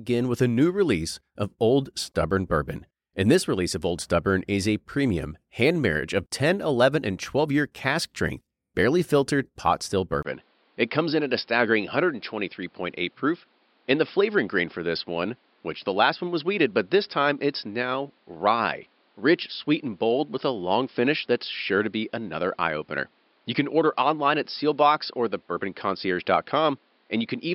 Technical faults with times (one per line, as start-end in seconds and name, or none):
10.23-27.54 input switched to a poorer device